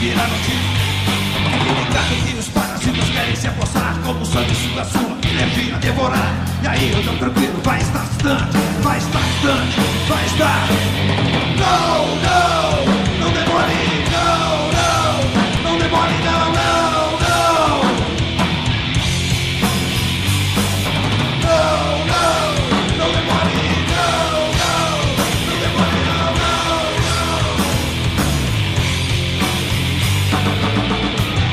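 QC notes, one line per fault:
7.59, 13.58, 15.57, 23.56, 25.55 s: overlap between stream segments. Each skip lands on a 2-second segment boundary where a few milliseconds were trimmed, so the waveform jumps without a gap or silence, unlike a dropout.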